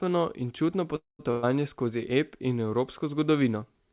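At 0.96 s, after "in čutno", the sound fades into a buzz or hiss, then silence until 1.21 s, resuming intact: likely a call audio freeze from delayed packets. From 1.31 to 1.45 s a fading held buzz or hiss replaces the audio, which then skips ahead past about 120 ms lost in a burst of packet loss.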